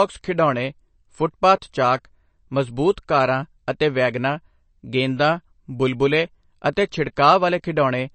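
Throughout the speech, MP3 compression damage is plainly audible. Nothing sounds above 8.3 kHz, a flat ceiling on a spectrogram, and weak components flicker as isolated blocks, giving a watery, swirly texture. This is likely an MP3 encoder starved of bits, fitting a bitrate near 36 kbps.

At 6.76 s there is pre-echo. The codec spread its quantisation noise across a block ending in a sharp attack, so a short hiss of about 10 ms leads it. On the waveform a fuzz precedes the onset, and the attack sounds softened.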